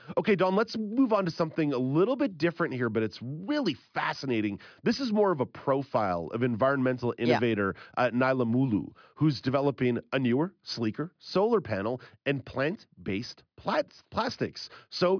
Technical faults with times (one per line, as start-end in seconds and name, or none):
none